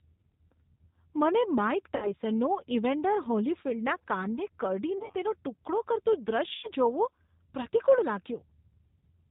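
Throughout, the G.729 codec damage is plainly audible: speech is rebuilt from a filter, pitch predictor and sparse pulses, leaving a rough, synthetic edge, which fits G.729A at 8 kbit/s. A spectrogram shows nothing above 4 kHz and smeared, pulse-like harmonics.

VoIP packet loss concealed by the speech codec occurs at 1.96 to 2.14 s after "મને માઇક" (60 ms missing), at 4.98 to 5.14 s between "ઇવેન્ડર હોલીફિલ્ડના કાનને" and "તેનો ટુકડો કરતું" (80 ms lost in gaps of up to 40 ms, spread over 160 ms), and at 6.55 to 6.68 s after "તેનો ટુકડો કરતું" (80 ms). Each time, the decoder extends the last pitch and filter into a buzzy tone or coloured noise that fades. The spectrogram shows frozen harmonics decaying, and the waveform shows a shrinking, repetitive envelope that recovers only gradually.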